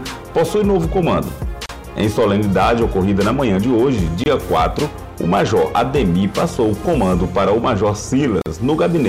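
Throughout the clip, the signal is driven about 8 dB beyond what one stage in the chain can pass, so it suffers hard clipping: every peak that exceeds the limit is sliced flat. Only a small share of the waveform reaches that ceiling, but each flattened top sprays harmonics high into the spectrum. The result is distortion on the loud moments of the sound.

The audio was also encoded as separate pieces and butted together without trimming the encoder's start-up delay and end padding, leaving a gap at a join of encoded pieces three times over. The first runs from 1.66 to 1.69 s (33 ms), the second from 4.24 to 4.26 s (24 ms), and the third from 8.42 to 8.46 s (45 ms). Each is a brief dropout with smeared edges, after which the sound resumes exactly where it broke off.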